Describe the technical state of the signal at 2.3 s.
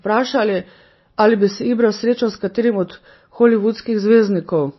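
At 2.3 s the speech carries MP3 compression damage, and it runs through the whole clip. Nothing is heard above about 5.8 kHz, so the top is dull and s sounds lose their edge. The damage is plainly audible. The likely cause is an encoder starved of bits, which fits a rate near 24 kbps. It drops weak frequency lines that flicker between frames. That gives a watery, swirling quality and smeared attacks.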